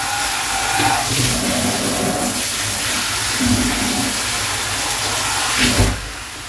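No technical faults can be heard anywhere in the sound.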